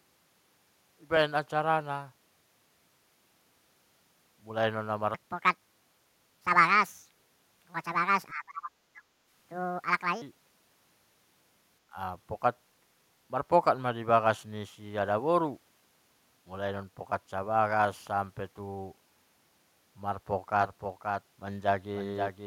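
From 8.32 to 9.13 s the speech sinks sharply, falling by something like 35 dB at its deepest for most of that stretch. This is the sound of speech suppressed in double talk. The likely cause is both ends talking at once: the echo canceller could not tell the near talker from the returning loudspeaker echo, so it clamped down on everything passing through.

At 20.61 s a second copy of the speech appears, trailing the original by about half a second and only around 5 dB quieter. It continues to the end of the clip. It enters abruptly, carries the full frequency range, and has no reverberant tail or room colouring, so it sounds like a clean duplicate rather than an acoustic echo. This is a doubled audio track, likely from the same audio being picked up again by a slower path and mixed back in.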